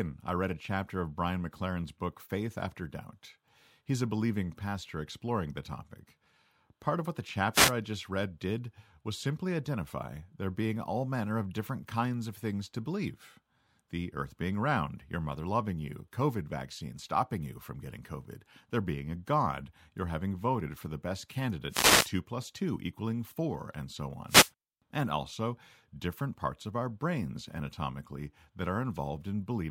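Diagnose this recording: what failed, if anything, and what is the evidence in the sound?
The wireless mic link drops out briefly, giving three wireless microphone noise hits as short static swishes over the speech at 7.53 to 7.73 s, 21.69 to 22.11 s and 24.27 to 24.51 s. Reflections are cancelling the FM carrier, so receiver noise surges through until the signal recovers.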